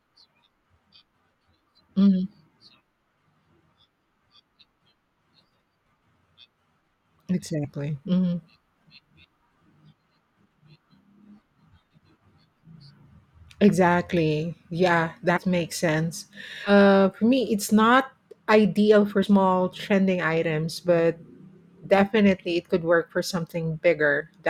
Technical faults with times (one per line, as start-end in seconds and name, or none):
7.64-7.68 compressed frames skipped
15.36 compressed frames skipped
16.66-16.72 compressed frames skipped
19.22-19.27 compressed frames skipped